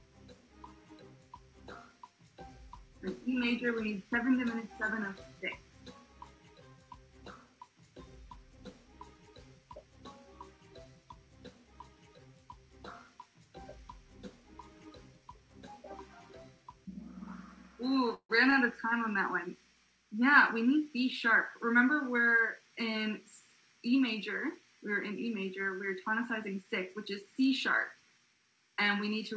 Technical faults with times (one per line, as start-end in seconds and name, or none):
18.14-18.32 call audio freeze
26.94-27.45 jitter buffer speed-up